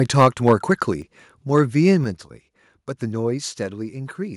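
Right at the start, from 0.19 to 0.72 s, the loudest syllables get a harsh, crackly edge. That's microphone overload: the peaks push about 5 dB past the converter's ceiling and their tops are sheared flat, with a few percent of samples clipped, most likely because the mic input is set too hot. At 1.02 s the microphone volume is stepped down, and speech and background both drop by about 4 dB at once, likely the call software pulling the device gain back after that distortion. It isn't enough, though. Shorter bursts of the same crackle come back from 1.55 to 1.59 s, about 2 dB over, and from 1.87 to 1.91 s, about 1 dB over, each likely the same clipping at the converter. A second step down follows at 2.04 s, a sudden drop of about 5 dB in the whole sound level, likely another automatic input-gain cut reacting to those peaks.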